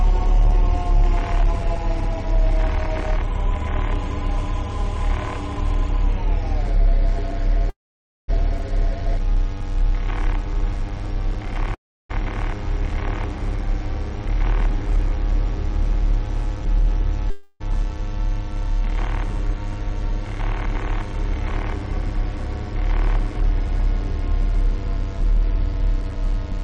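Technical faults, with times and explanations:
7.69 to 8.30 s and 11.75 to 12.11 s, call audio freeze: the sound stops and a short fading tail gives way to near-silence, about 0.53 s in the first and 0.32 s in the second, before resuming where it left off. This adds roughly 0.59 s and 0.35 s of delay and loses nothing, which fits a likely jitter buffer underrun from packets held up in transit.
8.58 s, skip ahead: playback jumps forward with only a tiny join, dropping roughly 0.3 s of audio. The later material was already queued, so the two sides are butted together and the built-up delay shrinks by about the same amount.
8.82 to 11.67 s, jitter buffer slow-down: the sound runs at 97% speed with unchanged pitch, stretched by 93 ms in total. Single pitch periods or pause fragments are repeated many times to rebuild the buffer's reserve, giving drawn-out sounds.
14.26 to 16.87 s and 24.73 to 26.34 s, jitter buffer speed-up: the sound runs faster at the same pitch, at 103% and then 102%, with roughly 70 ms and 40 ms trimmed. 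Short pitch-period pieces are cut repeatedly to lower an overfull buffer's delay.
17.30 to 17.62 s, long network dropout: about 0.3 s of audio never plays. The gap is bridged by a continuation of the last sound, heard as a fading buzz or hiss, and the sound resumes further on without the lost part. The likely cause is packets that never arrived.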